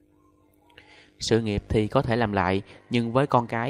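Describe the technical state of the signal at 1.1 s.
At 1.1 s the signal is intact, with no dropout, distortion, noise burst or other fault audible at that point.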